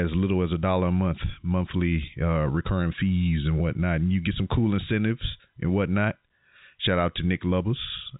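No technical fault can be heard in this speech, which comes through the G.711 telephone coding path as expected: the band stops at 3.8 kHz, and the coding leaves at most a faint trace.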